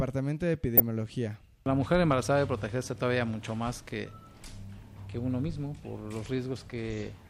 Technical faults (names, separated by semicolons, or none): DAB burbling